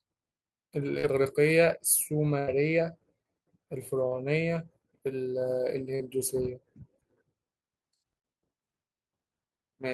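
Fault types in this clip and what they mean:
short concealed packet loss: brief smears or wobbles where about 40 ms of audio arrived too late and the decoder patched each gap by continuing the preceding sound.
burst of packet loss: at 2.39 s the sound stretches into a held, fading tail, then resumes with about 80 ms missing after consecutive packets were lost.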